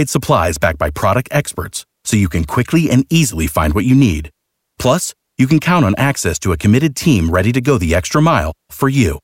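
No dropouts, glitches or other technical faults turn up anywhere in this bit of speech, so there's nothing here to flag.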